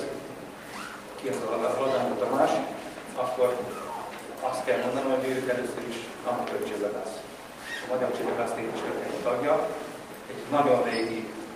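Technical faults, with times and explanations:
No technical faults can be heard anywhere in the audio. Nothing in it calls for a time or an explanation.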